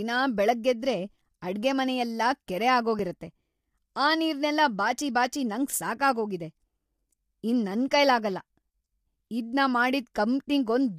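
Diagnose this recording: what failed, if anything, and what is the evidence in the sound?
Codec stage: the speech throughout is plainly rough and grainy, with noise between harmonics, likely from low-delay AAC compression (AAC-ELD) at a rate that fits about 32 kbps.

Driver or buffer stage: at 2.99 s, just after "ಬೆಳ್ಗಾಗೆದ್ರೆ ಅಡ್ಗೆಮನೆಯೆಲ್ಲ ಕೆರೆ", the audio jumps ahead by a few milliseconds with no gap, likely a dropped buffer (overrun) splicing the remaining samples together.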